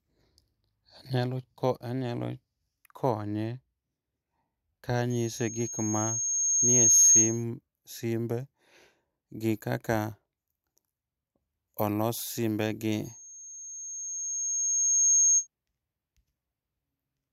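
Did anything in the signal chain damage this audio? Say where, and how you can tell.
Yes. A 6.5 kHz tone swells over about two seconds at 5.10–7.44 s and 13.04–15.47 s. That is loudspeaker feedback squeal from the microphone picking up its own loudspeaker.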